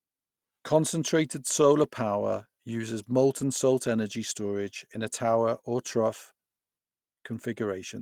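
Lost packet rebuilt from error correction at 1.61–1.63 s, just before "power uses", and again at 3.39–3.41 s, between "power uses" and "salt energy storage in". Each 20 ms stretch is consistent with a single dropped packet. The decoder filled it from the low-bitrate copy carried in the following packet, so there's no gap, just a brief rougher, noisier patch.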